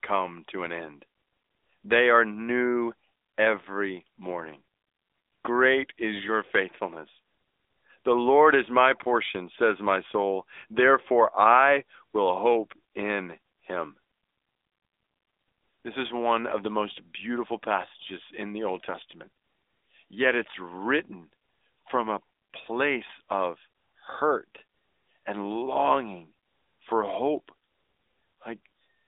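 From start to finish the speech carries AMR narrowband mobile codec damage. Nothing survives above 3.8 kHz, and the band sits roughly between 250 Hz and 3.7 kHz. What separates this from a simple telephone-style filter is the plainly audible buzzy, synthetic texture. The voice is rebuilt from a vocal-tract model excited by sparse pulses, not merely trimmed, and the degree of roughness fits an AMR-NB mode around 10.2 kbps.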